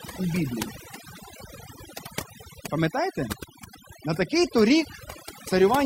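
Overdone noise removal runs throughout, muting bands near the noise estimate. The background drops, and near-silent gaps twinkle, showing as scattered isolated specks on a spectrogram.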